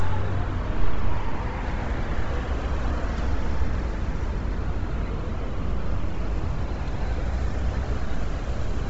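From start to finish the sound carries heavy codec damage, most likely Bluetooth LC3 compression. Nothing gets through above about 7.7 kHz, so the top end is simply gone, and what's left up high has that breathy, grainy sheen you get when a transform codec discards most of the upper spectrum and papers over it with noise. The damage is severe enough to point to a low bitrate, around 24 kbps, with the short 7.5 ms frames LE Audio uses.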